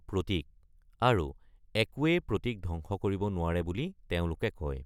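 Speech, with no technical fault to report. Nothing in the recording calls for a time stamp or a cause.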